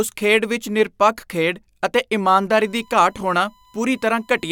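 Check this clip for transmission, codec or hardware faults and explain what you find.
One hardware fault: USB whine from 2.62 s to the end of the speech, just after "ਵਿੱਚ ਨਿਰਪੱਖ ਖੇਡ ਅਤੇ". Current drawn in 1 ms USB frames leaks through power or ground as a steady 1 kHz tone, roughly 35 dB under the speech. On a spectrogram it is a thin horizontal line at 1 kHz.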